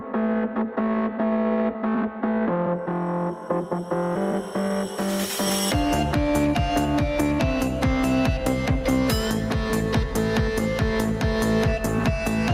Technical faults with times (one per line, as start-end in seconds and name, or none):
0.00-12.53 gain pumping